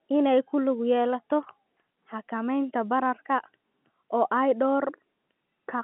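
No technical faults are audible.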